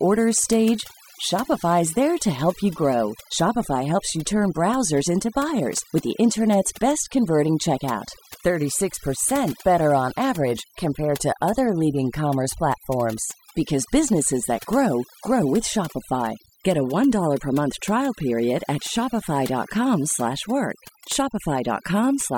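From start to finish the speech carries overdone noise removal. A noise reduction process was set too aggressively for a noisy source, so any frequency band sitting close to its noise estimate is pulled far down or switched off entirely, and the quieter components of the voice are removed along with the noise. Between phrases the background drops to near silence scattered with twinkling specks.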